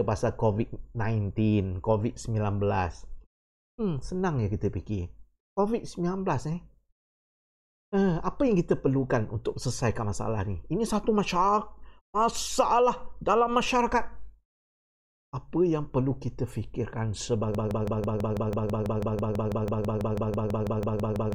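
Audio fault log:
17.55 to 21.35 s, broken-record loop: a fragment of about 164 ms repeats exactly, back to back, roughly two dozen times until the clip ends, giving a stuttering, machine-gun sound. The likely cause is a stalled player, encoder or stream resending its last buffered piece, so the audio that should follow is lost.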